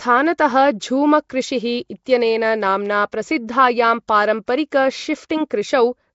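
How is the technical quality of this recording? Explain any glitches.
Quality is poor, with plainly audible codec damage across the whole clip and one brief smearing artefact.

Throughout, the speech has a rough, hissy halo and a smeared, underwater character, with nothing above 7.7 kHz. This is likely Nellymoser compression: coarse fixed-depth coding starves weak bands, which are refilled with noise. The damage fits a low bitrate around 32 kbps.

At 2.05 s, just before "नाम्ना प्रसिद्धायां", a pre-echo appears as a short hiss about 16 ms long ahead of a sharp onset, which sounds softened. Coding noise scaled for the loud attack spreads back across the quiet start of its block.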